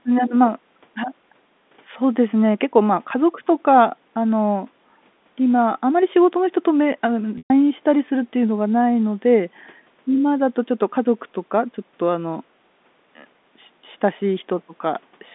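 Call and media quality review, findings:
Brief buzzy hold, then dropout to silence, 7.38 to 7.50 s. Packet loss with pitch repetition in the receiver's concealment: last pitch period looped, faded over roughly 50 ms, 120 ms gap, fits four lost 30 ms packets; speech resumes via short cross-fade.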